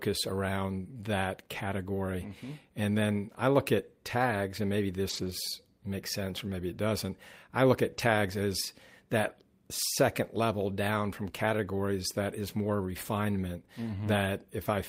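A speech recording with two runs of lost packets rebuilt from error correction: at 5.09–5.27 s, after "at tags and maybe", and 7.93–8.03 s, before "as that second level", the decoder substituted low-bitrate redundant copies, so those stretches sound rougher and noisier without any gap. A short concealed packet loss at 11.31–11.35 s, after "second level down from", has about 20 ms extrapolated from the preceding sound, heard as a brief smear before the real audio resumes.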